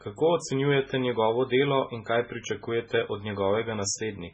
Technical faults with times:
0.00-4.34 MP3 compression

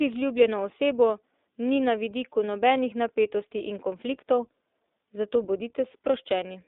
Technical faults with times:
0.00-6.68 iLBC codec

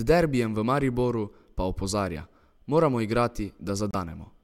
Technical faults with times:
3.91-3.95 corrupt frame decoded

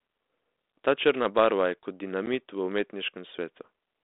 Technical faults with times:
2.26 packet loss on an ADPCM call

